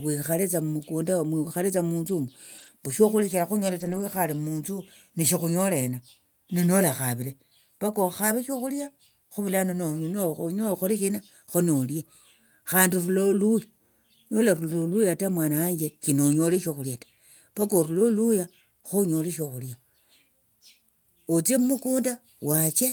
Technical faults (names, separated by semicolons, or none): lost packet rebuilt from error correction